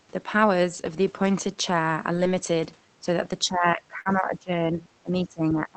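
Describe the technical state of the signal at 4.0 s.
At 4.0 s the echo canceller was likely caught in double talk, treating this talker's speech as loudspeaker echo while the far side spoke. From 3.44 s to 4.80 s the speech is turned down by as much as about 15 dB, dipping and thinning rather than holding steady.

Inside that stretch, from 4.01 s to 4.07 s, about 40 ms of packets never reached the decoder in time. This is short concealed packet loss: the receiver extended the preceding sound to cover the hole before blending back, heard as a brief smear or wobble.

The last part of that gap, 4.05 s to 4.07 s, is a lost packet rebuilt from error correction. The next Opus packet carried a low-bitrate copy of the missing 20 ms, so there is no silence, but that frame sounds rougher and noisier than the audio around it.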